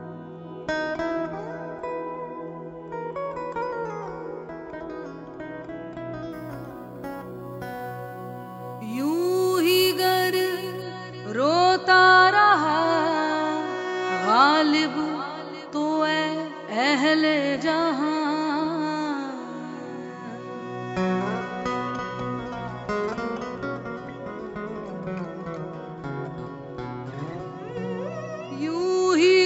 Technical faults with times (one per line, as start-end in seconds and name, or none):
6.32-10.82 imaging from sample-and-hold upsampling